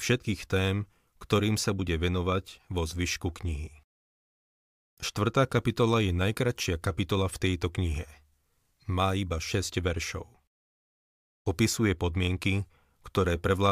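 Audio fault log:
No faults turn up anywhere in this speech recording. Nothing in it calls for an entry in the log.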